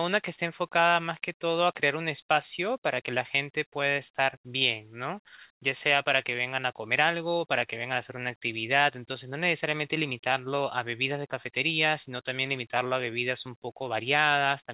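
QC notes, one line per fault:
No faults; the speech runs over a call path with G.711 mu-law coding at 64 kbps, which leaves nothing above 4 kHz.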